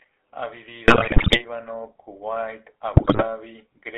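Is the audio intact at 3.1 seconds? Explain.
No. From 2.94 to 3.27 s, GSM bit errors corrupt the decoder's filter, pitch and gain values. The speech breaks into squawks and gargling, unlike smooth packet-loss gaps. Under this, the GSM full-rate codec's pulse-driven excitation gives a steady buzzy roughness, with the band limited to 300 Hz–3.5 kHz.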